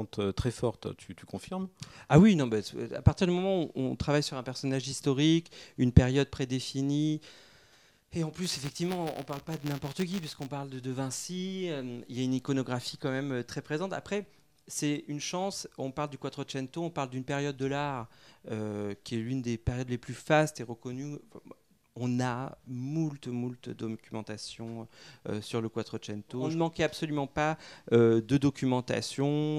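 From 8.44 to 10.47 s, buffer tearing: writer and reader pointers crossed, so a small slice of each buffer repeats audio about 10 ms old, producing a 172 Hz rattle that fits a 256-sample buffer.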